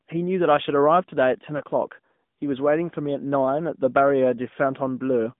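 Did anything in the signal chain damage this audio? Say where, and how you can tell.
Yes. The codec stage shows the clearest damage: the speech has passed through the AMR narrowband mobile codec for its whole length. The band is confined to roughly 150 Hz to 3.6 kHz, so a spectrogram shows an empty region above 3.6 kHz and thin lows. The voice has a plainly audible buzzy, synthetic edge from the pulse-driven vocal-tract model. The amount of that coloration points to a mid-rate mode around 10 kbps.

The network stage adds lost AMR speech frames at 1.58 to 1.62 s. Radio errors corrupted a frame, and the decoder filled the 20 ms gap by repeating the last good pitch and vocal-tract settings at reduced gain. This is heard as a brief dip or warble, consistent with a single lost frame. On the waveform the envelope sags briefly. On a spectrogram the harmonics hold flat and dim instead of moving, then resume weak or rough for a moment.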